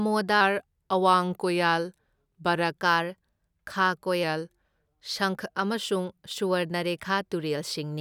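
A clock-matching stage likely stepped the playback rate down by 5.9% in a drift correction step from 0.41 to 2.77 s and 4.23 to 4.92 s. The speech slows and drops about a semitone before snapping back, the second time just before "ꯁꯪꯈ ꯑꯃꯁꯨꯡ".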